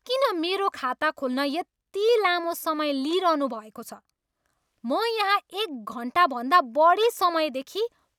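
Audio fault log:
No faults found in the speech audio.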